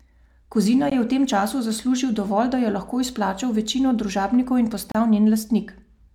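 Separately encoded pieces were joined without trimming encoder delay and end padding, so this speech drops out briefly about every 4 s: a gap at a join of encoded pieces at 0.90 s (19 ms) and from 4.92 to 4.95 s (32 ms), after "izplačal večino družabnikov in". Each is a silence with smeared edges before the speech resumes.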